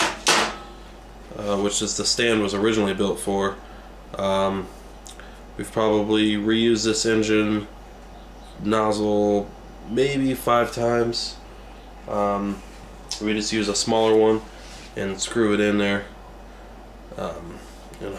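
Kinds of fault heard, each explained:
No kinds of fault are heard in this clip.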